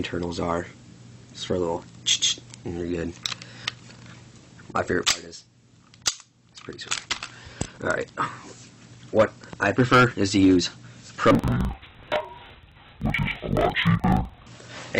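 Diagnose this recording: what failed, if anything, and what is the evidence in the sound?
Sample-format conversion fault: interleaved audio read as planar, 11.31–14.47 s. Each 42.7 ms block plays at half speed, an octave low and doubled; spectrogram shows halved harmonics, periodic seams.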